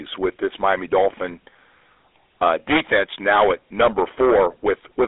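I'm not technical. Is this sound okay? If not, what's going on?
No. The GSM full-rate codec, an early mobile-phone coder, affects the speech throughout. It imitates the throat and mouth driven by spaced pulses, discarding much detail, so the speech sounds buzzy and gravelly, and nothing above about 3.8 kHz survives, leaving it muffled and phone-like.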